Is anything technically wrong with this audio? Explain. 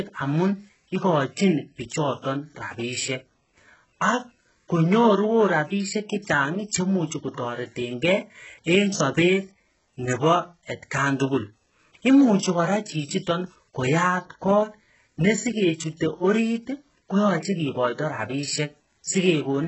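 Yes. Throughout the speech there is heavy HE-AAC compression damage, likely from a very low bitrate around 8 kbps. Nothing reaches above 8 kHz, and the upper band is rebuilt from copied lower bands, so s sounds turn gritty and metallic rather than simply dull, as a plain low-pass cut would sound.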